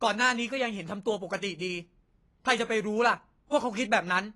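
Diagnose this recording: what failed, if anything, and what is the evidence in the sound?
Codec stage: throughout the speech, the spectrogram shows a flat ceiling at 11.5 kHz, and coarse quantisation smears the sound, likely AAC compression at roughly 32 kbps.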